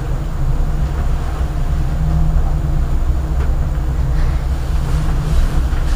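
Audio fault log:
Throughout: wrong sample rate. Everything runs 1.38 times too fast and sits about 5.5 semitones high. Playback is clocked faster than the recording, with no conversion between them. The ratio fits a 32 kHz recording played at 44.1 kHz. Speed and pitch shift together.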